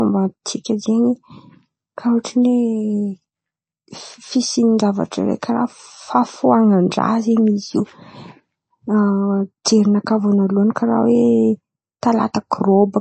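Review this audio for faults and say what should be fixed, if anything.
Throughout the speech, nothing is present above 8.3 kHz, and the sound is plainly watery and swirly, with metallic chirps on s sounds. This is likely MP3 compression at a low bitrate, which fits roughly 32 kbps: short of bits, the encoder cuts the treble and zeroes weak frequency lines that flicker between frames. To prevent it, encode from the original at 128 kbps or higher, or use a lossless format.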